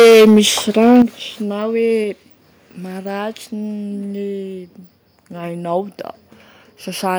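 A speech clip with hard, crackling distortion from 0.0 to 0.4 s and again from 0.85 to 1.02 s, likely microphone overload: peaks run about 9 dB and then about 4 dB past the converter's limit, flattening many samples in the first burst and fewer in the second. At 1.02 s, voice and background drop together by about 10 dB, likely the call software stepping the microphone volume down in response to the clipping.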